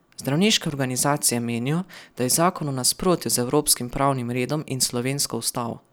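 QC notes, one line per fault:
No technical faults can be heard anywhere in the speech recording.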